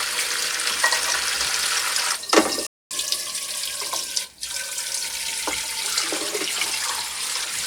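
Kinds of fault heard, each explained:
Playback stall: the sound cuts out abruptly at about 2.67 s and the output stays completely silent for roughly 240 ms, until 2.91 s, when it resumes. This is a gap where the sound simply stops rather than fading, long enough to register as a hiccup in the flow. The likely cause is the player running short of data or having its audio thread blocked, leaving nothing to send to the output until it recovered.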